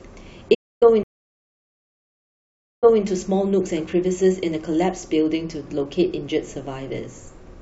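At 0.54 s the speech cuts out abruptly and stays silent for about 0.27 s, picking up again at 0.83 s where it left off. This is a playback stall: the output simply paused in mid-flow and then continued from the same point. The likely cause is the player running short of buffered data, or its audio thread being held up briefly, so nothing reached the output until it recovered.

A second, much longer gap begins at 1.03 s. The speech goes silent for about 1.8 s and returns at 3.04 s, but it resumes roughly 0.21 s earlier than where it broke off, so a short stretch of speech is heard twice. This is a stream reconnect: the connection dropped, the player reconnected and started a fresh decoder, and the server resent a slightly earlier portion of the stream.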